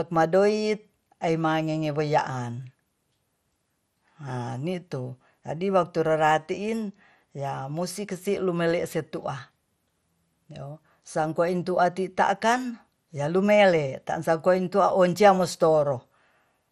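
Speech throughout the clip likely passed through MP2 compression at a starved bitrate, pointing to roughly 64 kbps: nothing sounds above 14.3 kHz, leaving it dull, with audible gurgling, granular distortion.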